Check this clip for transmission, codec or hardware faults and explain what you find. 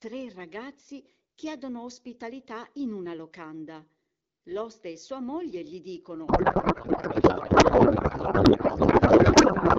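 One transmission fault is present. From 6.27 s to the end, a codec payload misread: the AMR wideband decoder seems to read octet-aligned frames as bandwidth-efficient, replacing the speech with garbled noise and warble. On a spectrogram the harmonic structure gives way to smeared, unrelated energy.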